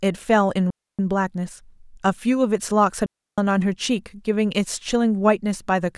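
At 0.70 s the speech drops into a clean hole of near silence for about 0.28 s, then does it again at 3.06 s for about 0.32 s. That's a digital wireless dropout: the link lost too much data, so the receiver muted with a quick fade, and there's no noise burst around either gap.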